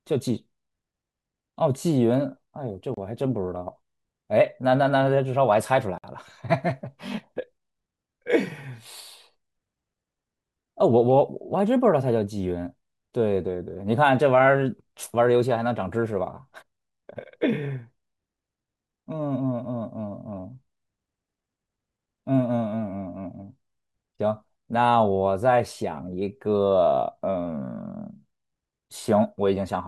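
At 2.94 to 2.97 s the speech drops to silence for 30 ms, and again at 5.98 to 6.04 s for 56 ms, before resuming where it stopped. These gaps are likely a Bluetooth stall: delayed wireless packets let the receiver's buffer run empty, so playback halted until retransmissions arrived. On a waveform each shows as a flat line cutting mid-sound. On a spectrogram it appears as a clean vertical blank strip across all frequencies.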